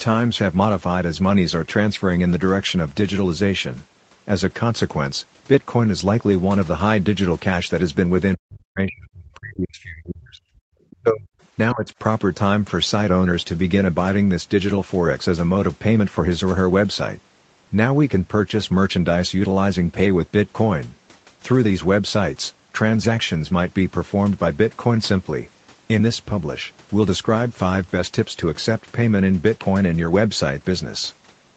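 From 8.36 to 10.44 s, the talker's speech is pushed down hard, by about 40 dB at its deepest, for roughly two seconds. It sounds like the voice sinks almost to silence. This is likely speech suppressed in double talk. The echo canceller seems to have heard both sides at once, failed to tell them apart, and turned everything down. It happens again from 10.89 to 11.34 s, with a similar deep drop for about half a second.

Inside that second dip, at 10.91 to 10.96 s, a brief scrap of the other side's voice leaking through can be heard. It is very faint, about 30 dB below the talker. It is a short fragment of the far-end sound, likely coming back out of the loudspeaker, which the canceller did not fully remove.

At 11.73 to 11.87 s, there is one more dip of the same suppression kind. It is much shallower, about 15 dB, and lasts only a fraction of a second. The voice briefly drops rather than vanishing. 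Throughout, the sound stops at 8 kHz, as expected from the Opus call path.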